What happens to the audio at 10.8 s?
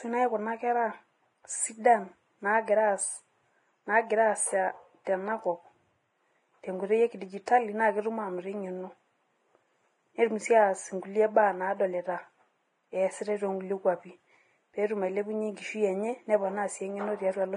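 At 10.8 s the speech carries the same damage present throughout the clip, likely from heavy Vorbis compression at a bitrate around 28 kbps. The encoder discards everything above 10.6 kHz and quantises the remaining treble coarsely, so the speech turns hissy and grainy, tones roughen and attacks blur.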